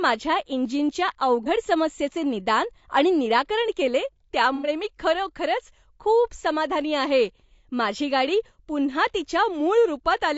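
The speech is likely carried through low-delay AAC compression, AAC-ELD at a rate that sounds like about 32 kbps. Its short frames resolve pitch harmonics poorly, so the voice is plainly rough and grainy throughout, with noise filling between harmonics and a thin, synthetic-sounding top band.

AAC frame loss with concealment occurs from 1.43 to 1.47 s, just before "समस्येचे निदान आणि निराकरण". A gap of about 30 ms, which fits one missing frame, is patched from the previous spectrum and heard as a brief smeared, noisy blip. From 4.55 to 4.69 s, between "निदान आणि निराकरण केले" and "मी खरोखरच खूप समाधानी", a longer gap of about 90 ms, consistent with three consecutive lost frames, is filled in from the last good spectrum. It produces a longer phasey, smeared patch in the speech.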